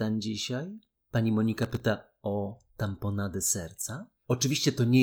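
Processor overload crackle runs from 1.57 to 1.80 s. For about a quarter of a second the processor falls behind and misses a run of deadlines, roughly fifteen of them, each for a very short buffer of under a millisecond. Every missed buffer leaves a tiny patch of silence with hard edges cut into the speech, and the rapid string of dropouts is heard as a gritty, tearing crackle that stops at 1.80 s.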